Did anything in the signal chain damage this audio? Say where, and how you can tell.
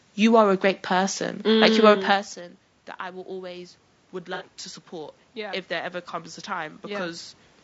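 Yes. Low-delay AAC compression, throughout: the speech sounds rough and grainy, with noise filling the gaps between harmonics and a thin, synthetic-sounding top band. This points to the codec stage, likely AAC-ELD at a low rate, which fits about 32 kbps. Its short frames cannot separate closely spaced pitch harmonics well, and at that bit budget the quantisation noise spreads between them while the highest band is rebuilt from lower content.

Automatic gain rising, from 3.0 s to 7.32 s: after the level drop near 2 s, which sounds like the talker moving back from the microphone, the speech and the room noise swell together by about 6 dB over several seconds. That shared, gradual rise is the call-processing stage. The gain control found the input much quieter than before and slowly raised its gain to compensate.

AAC frame loss with concealment, at 4.34 to 4.43 s: a brief smeared, noisy patch interrupts the speech for under a tenth of a second. 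This comes from the network or decoder stage, and the length fits a couple of lost frames. The decoder filled the gap by extrapolating from the last good spectrum with scrambled phase, so the patch keeps roughly the right energy but loses its harmonic structure.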